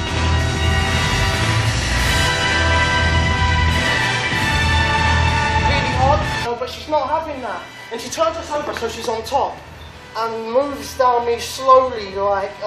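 At 6.44 to 6.46 s there is a brief glitch lasting about 20 ms, caused by damaged data in the compressed stream. Corrupted bytes made the decoder misread the affected frame and lose sync until it found the next valid frame header.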